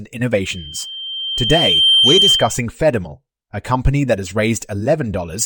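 Speech with loudspeaker feedback squeal from 0.43 to 2.62 s: a 3.1 kHz tone swells over roughly one and a half seconds until it sits a few decibels above the voice. The microphone is re-amplifying its own loudspeaker, and loop gain at 3.1 kHz exceeds unity.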